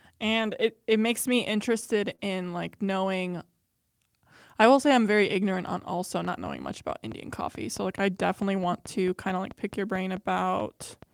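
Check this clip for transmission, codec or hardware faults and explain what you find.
Yes, there are three kinds of fault: packets rebuilt from error correction, one short concealed loss, and a train of clicks through the last part of the clip.

Lost packets rebuilt from error correction occur at 0.37–0.47 s (just before "it it makes"), 2.11–2.13 s, 2.20–2.22 s (just before "in like knowing"), 5.54–5.56 s and 8.58–8.60 s. In each case packets failed to arrive, but the following packet carried a low-bitrate Opus copy, and the decoder played that copy instead. There is no gap, only brief rough, noisy patches. The first patch lasts about 60 ms, which points to several consecutive lost packets. The others last 20 ms each, which fits a single 20 ms frame.

A short concealed packet loss sits at 2.15–2.20 s, also just before "in like knowing". About 20 ms of audio never reached the decoder in time, and no redundant copy covered it. 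The receiver extrapolated from the preceding sound over about 25 ms and then crossfaded back into the real signal. This is heard as a momentary smear or wobble, packed tightly between two rebuilt patches.

A train of clicks runs from 6.25 s to the end. Sharp, similar pulses repeat at a regular 4.6 per second and peak a few decibels above the speech, so they tick audibly over both the talking and the pauses. The steady pace suggests a periodic source, likely electrical interference or a faulty connection or power supply, rather than anything in the network path.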